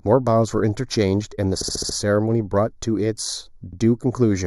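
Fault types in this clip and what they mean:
channel delay (comb filtering): One channel arrives roughly 0.2 ms behind the other, so when the two are summed to mono the shared speech cancels at evenly spaced frequencies, the first notch falling near 3 kHz, which leaves the whole clip hollow and phasey.
repeated frames: A 69.7 ms block of compressed audio, which fits a run of three frames, was written out more than once. It plays five extra times from 1.60 to 1.95 s, adding 348 ms of stutter, then once more from 3.72 to 3.79 s.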